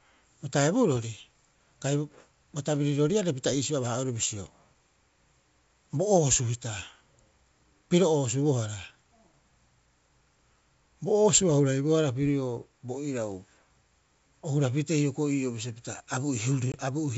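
A single lost packet near 16.72 s leaves a hard-edged 20 ms silent gap, after which the ADPCM decoder's predictor briefly mismatches, so speech returns slightly distorted.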